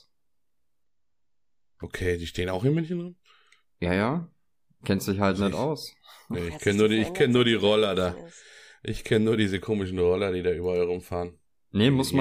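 From 0.83 to 1.83 s the speech shows interleaved audio read as planar: alternating left-right samples in 256-sample blocks, 5.33 ms each, are split into halves. With blocks this short, the sound turns dull and robotic, buzzing at 188 Hz without a clear octave drop.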